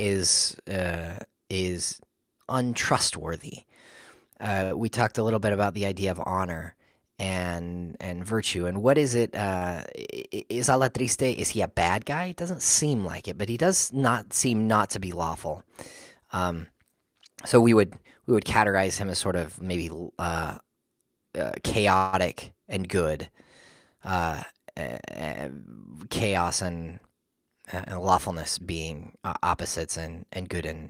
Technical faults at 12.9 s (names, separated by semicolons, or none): none